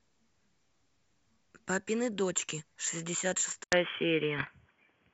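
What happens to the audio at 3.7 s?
At 3.64 s the sound drops out for about 80 ms, then returns dull and boxy with nothing above 3.4 kHz, a modest level shift and a faint new background noise to the end. The likely cause is an input switched to a poorer device in mid-recording.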